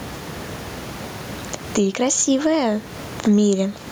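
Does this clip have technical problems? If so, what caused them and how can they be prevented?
Yes. Gain pumping runs throughout the speech, with the gain swinging around 15 dB; the room noise sits about 30 dB below the voice. This likely comes from input gain set far too high with a fast limiter clamping peaks. Keep the microphone gain lower and use a gentler, slower compressor, or none.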